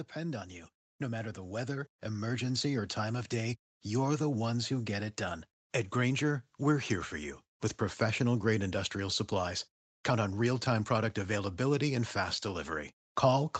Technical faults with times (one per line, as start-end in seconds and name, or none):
0.13-3.41 automatic gain rising